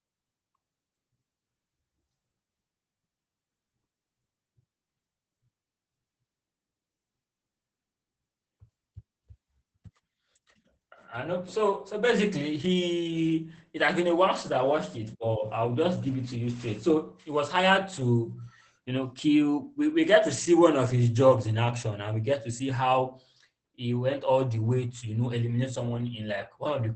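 Opus voice compression runs through the whole clip. Nothing survives above 8.5 kHz, and the speech sounds muffled, hoarse and faintly robotic, which points to the SILK voice coder at about 12 kbps. Unlike a simple low-pass filter, the coarse excitation coding roughens the voice.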